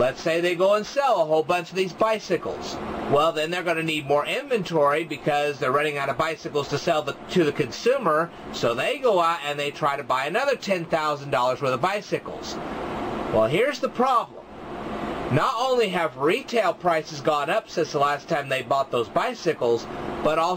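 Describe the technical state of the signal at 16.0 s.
At 16.0 s the signal is intact, with no dropout, distortion or other fault audible at that moment.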